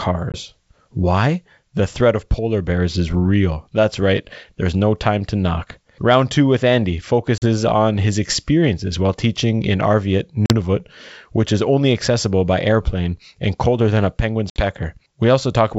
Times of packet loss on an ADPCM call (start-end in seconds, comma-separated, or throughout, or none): 0.32-0.39, 7.38-7.43, 10.46-10.52, 14.50-14.65